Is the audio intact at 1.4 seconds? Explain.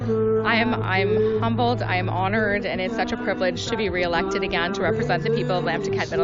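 No. At 1.4 seconds, as everywhere else in the clip, a filter is restarted on every block. Instead of carrying its internal state from one block to the next, it begins each block from silence, so every block boundary produces a small transient. These transients recur 50 times a second, one every 20 ms, and are heard as a steady 50 Hz buzz riding on the sound that grows louder and quieter with the signal's level.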